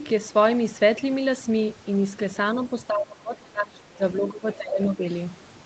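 Overdone noise removal runs through the whole clip. The noise reducer was set too aggressively, cutting any frequency band near its noise estimate down to nothing. The background drops and breaks up into twinkling specks, and the quieter parts of the speech vanish.

Speech suppressed in double talk appears from 2.55 to 5.03 s, likely because both ends were talking at once. The echo canceller couldn't separate the near talker from loudspeaker echo, so it turned everything down. For about two seconds in total the speech dips, by roughly 20 dB at its deepest.

The other side's voice leaking through is heard from 4.52 to 4.56 s as a brief, faint scrap about 25 dB below the main speech. It is likely loudspeaker sound that the echo canceller failed to remove from the microphone.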